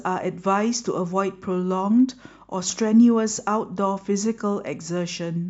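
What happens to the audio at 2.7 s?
At 2.70 to 2.73 s, an overlap between stream segments occurs. Two pieces of the stream carry time stamps that claim the same stretch of time, and the player trims the duplicated part even though the sound there was never actually doubled. About 24 ms of real speech is thrown away, so the waveform jumps straight from one point to a later one, which is heard as a brief click or tiny skip in the speech.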